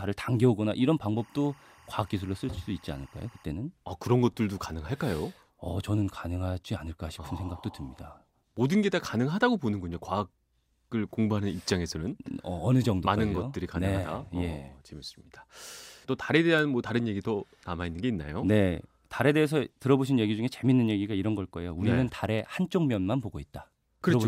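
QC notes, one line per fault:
1.16–3.44 s, timecode bleed: for a bit over two seconds there's a chirpy warble sitting well under the speech, somewhere around 30 dB down. That's linear timecode leaking in from a neighbouring track or cable. The code is a square wave flipping between roughly 1 kHz and 2 kHz as it spells out the bits, and the pattern cycles at 23.976 frames per second, which gives it that steady ticking flutter.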